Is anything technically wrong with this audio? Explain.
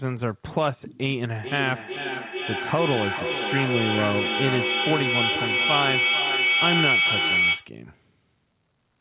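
Yes, there's a feedback howl running from 1.39 s to 7.76 s. It sounds like two devices in the same room on one call, so the mic picks up the speaker, sends it round again, and each trip comes back louder instead of fading. The loop settles on a tone around 2 kHz with a loop delay of roughly 400 ms and peaks about 2 dB above the speech, all inside a band with nothing above 4 kHz, which fits a narrowband telephone codec like G.711.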